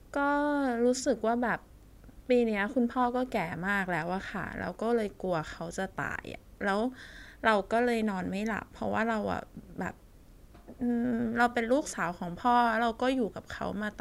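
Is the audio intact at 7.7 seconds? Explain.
Yes, the speech at 7.7 seconds plays through intact, with no dropout, click, distortion or other fault at that moment.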